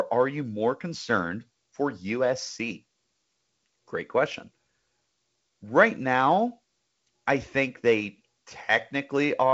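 There are no technical faults to describe at any point in this speech.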